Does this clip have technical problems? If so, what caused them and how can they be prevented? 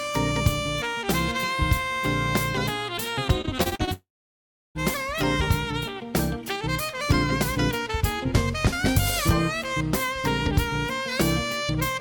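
Yes, two problems, both right around the 4-second mark.

From 3.41 to 3.89 s there's repeated packet loss, giving that choppy, robotic sound. Half a dozen short holes land in under half a second, the longest about 38 ms, roughly 140 ms missing in total. Each one gets patched by stretching the last bit of sound, so about 29% of that stretch is filled-in audio rather than the real thing. That's where the chopped texture comes from. A larger jitter buffer or forward error correction on the link would help prevent it.

Then from 3.93 to 4.77 s it sounds like a long network dropout, likely from the connection stalling outright. About 820 ms of audio never gets played. The receiver carries the last sound forward briefly as a fading buzz or hiss, and then you're left with roughly 700 ms of silence before the audio picks up again, with that chunk simply gone. A steadier connection, such as wired rather than congested Wi-Fi, or redundant transmission that can bridge short outages, would keep this from happening.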